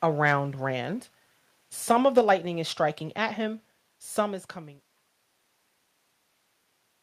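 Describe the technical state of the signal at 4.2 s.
At 4.2 s the signal is intact, with the level just starting to ease down in a smooth fade-out that has no click or hard edge.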